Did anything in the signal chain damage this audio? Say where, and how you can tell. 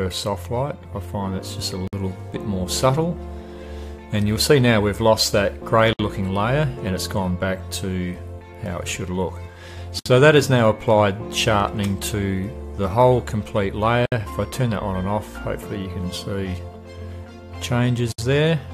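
Yes, at the codec stage. Silences open at 1.88, 5.93, 9.99, 14.06 and 18.12 s, every 4 s. The first lasts 54 ms, the rest 64 ms. The codec smears their edges. This is a gap at a join of encoded pieces, where each chunk kept its encoder delay and end padding.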